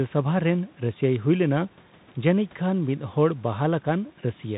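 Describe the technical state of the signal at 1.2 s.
At 1.2 s you're hearing Bluetooth CVSD headset codec damage, which runs through the whole clip. Each sample is just one up-or-down bit with an adapting step, fitting a 64 kbps stream, so nothing above 4 kHz survives, s sounds go scratchy, and granular hiss sits underneath.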